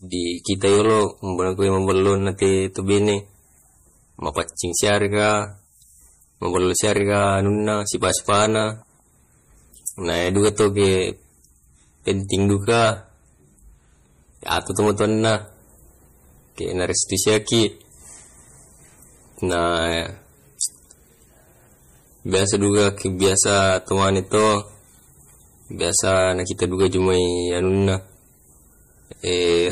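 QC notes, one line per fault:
Throughout: hard clipping. The speech is driven about 17 dB past what the signal path can pass, so its peaks are cut flat. A few percent of the waveform was cut at that limit. Those flat tops add high harmonics, heard as harsh fuzz on loud syllables.
Throughout: low-bitrate audio saved at a high bitrate. Nothing remains above 15.3 kHz, and the speech keeps a coarse codec texture. This fits a likely low-bitrate MP3 near 40 kbit/s, encoded again at a high rate. The second pass cannot restore what the first removed.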